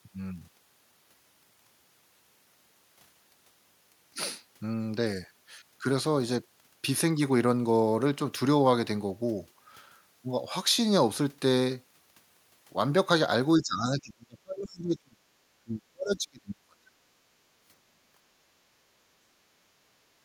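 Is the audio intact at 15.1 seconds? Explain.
No. From 13.56 to 15.22 s there is speech suppressed in double talk: with both sides talking, the echo canceller likely mistook this talker for loudspeaker echo and turned it down. The speech dips by as much as around 35 dB, over about a second and a half.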